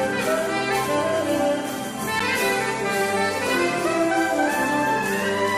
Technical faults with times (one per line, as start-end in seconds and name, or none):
2.19 gap between stream segments